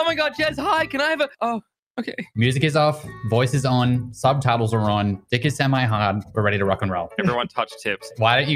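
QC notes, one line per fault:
Throughout: noise suppressor applied to music or sounds. A speech-tuned suppressor is treating the sustained parts and ambience as noise, so attacks come through but held tones and tails get pulled down by about 5 dB, giving a pumping, thinned-out feel.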